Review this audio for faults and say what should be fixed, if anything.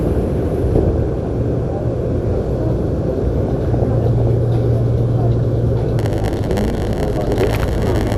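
Throughout, the audio was likely squeezed through MP2 compression at a low rate, consistent with about 80 kbps. Starved sub-bands drop out or quantise coarsely, giving a dull, gurgling, granular texture. Prevent this by encoding at a higher bitrate or using a more efficient codec.

From 0.79 to 1.28 s and again from 3.38 to 4.27 s, DAB burbling occurs. Reception errors, under one percent of bits, slipped past error correction and corrupted samples in the audio data, producing short blips of noise in single sub-bands. Prevent this with stronger reception, better antenna placement or more robust error protection.

From 5.98 s to the end, a block size mismatch (padded) appears. A stage writes shorter blocks than the next reads, and the zero-filled remainder creates a 100 Hz buzz while the audio runs about 8% slow at roughly normal pitch. Prevent this by matching block sizes between stages.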